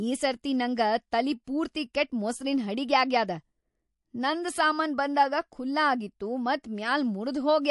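Throughout the speech there is plainly audible codec damage, likely from MP3 compression at a low rate, consistent with about 48 kbps. Weak frequency components drop in and out between frames, giving a watery, swirling texture and smeared consonant attacks.

From 1.44 to 1.47 s, a burst of hiss about 17 dB above the surrounding level runs for 31 ms ahead of a sharp onset. This is pre-echo. The quantisation noise spread across a long transform block, sized for the loud attack, also filled the quiet gap before it, which points to the encoder never switching to short blocks. The onset sounds softened and blurred.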